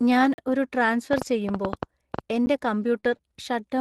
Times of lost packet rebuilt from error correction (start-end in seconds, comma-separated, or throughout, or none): 2.96-3.15